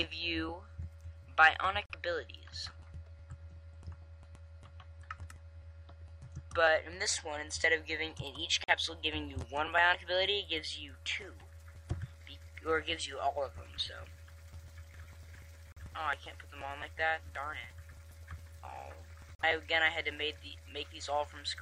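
At 1.86 to 1.95 s, 8.64 to 8.73 s, 15.72 to 15.82 s and 19.35 to 19.44 s the sound drops to silence for roughly 90 ms each time. These are digital broadcast dropouts: the receiver muted when a frame failed, which fits a single lost frame of about 43 ms each time, and it resumed on the next good one. Unlike network packet-loss concealment, nothing is repeated or smeared across the gap. The audio simply stops and returns, with that portion gone.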